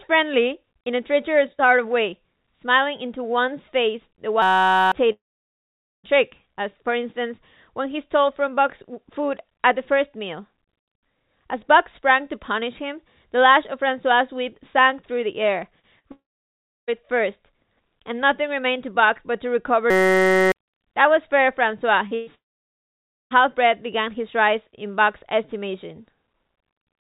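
At 4.42 s a steady 188 Hz buzz runs until 4.92 s. This is a system hang loop: the system froze while the hardware replayed one 5.33 ms chunk, which fits a 256-sample buffer, 93 times, and about half a second of audio is lost.

From 5.12 s the last sound trails off briefly, then near-silence runs to 6.07 s, and speech resumes with 920 ms missing. This is likely a long network dropout.

At 15.80 s a 36 ms smear marks short concealed packet loss, where the receiver covered for 40 ms that never arrived by stretching the preceding sound. At 15.99 s a brief held, fading tail lasting 46 ms follows, a burst of packet loss that covered 40 ms of lost audio. From 16.12 s to 16.91 s the sound fades into 670 ms of silence, with 760 ms gone, which is likely another long network dropout.

At 19.90 s the same 188 Hz buzz returns until 20.52 s. This second system hang loop repeats the 5.33 ms chunk 115 times and drops roughly 0.7 s.

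At 22.08 s a 34 ms smear marks short concealed packet loss. From 22.15 s to 22.30 s a held, decaying tail covers 120 ms missing in a burst of packet loss. From 22.35 s to 23.34 s the sound fades into 930 ms of silence, with 960 ms gone, likely a long network dropout.

Throughout, the G.711 mu-law call path at 64 kbps leaves nothing above 4 kHz.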